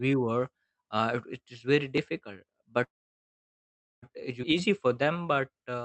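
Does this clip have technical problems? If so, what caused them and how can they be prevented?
Yes, there are four faults.

Repeated buffer: at 1.98 s the audio device did not receive new samples in time and played its last buffer once more, with a hard join at the repeat from a buffer of about 5 ms. Giving the audio thread higher priority or a slightly larger buffer prevents this.

Call audio freeze: from 2.83 to 4.04 s the packets were likely held up in transit and the jitter buffer ran dry. The last sound is stretched into a fading tail, then about 1.1 s of silence, and speech resumes where it stopped with nothing lost. A steadier network path or a deeper jitter buffer would avoid it.

Skip ahead: at 4.42 to 4.45 s a stretch of queued audio was dropped while later audio was already waiting. Roughly 0.7 s of speech is missing, and the two sides are joined by only an 8 ms bridge. Letting the buffer drain gradually instead of dropping audio would prevent it.

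Jitter buffer slow-down: from 4.70 to 5.83 s the buffer was low or had raised its target delay, and it built a reserve by repeating single pitch periods, adding 117 ms. The speech plays at 90% speed at unchanged pitch and sounds drawn out. Avoiding the preceding underrun would make this stretching unnecessary.

The Opus call path itself limits the audio to 8 kHz and adds its usual coding noise.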